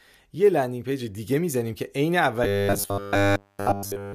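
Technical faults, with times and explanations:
2.44–4.14 s, robotic sound from repeated short buffers: new audio likely stopped arriving in time, so playback kept looping a tiny slice, which fits a 10 ms buffer, instead of nearly all the real signal. That loop imposes a fixed 100 Hz buzz, leaving a rigid, metallic sound.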